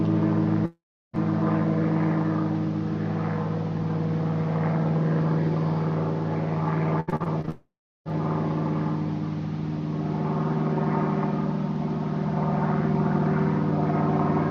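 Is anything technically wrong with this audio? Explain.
Yes. There are three faults.

From 0.65 to 1.15 s there is a long network dropout. The sound likely stopped arriving. The receiver stretches the last sound into a fading buzz, then gives about 0.33 s of silence, so the missing half-second is lost.

From 7.00 to 7.50 s there is repeated packet loss. Six short holes, the longest 72 ms, are each patched by repeating the last sound. The result is choppy, with pieces missing.

A second long network dropout follows at once, from 7.50 to 8.07 s. Again the cause is likely lost network audio. The fill fades, then about 0.32 s of silence follows.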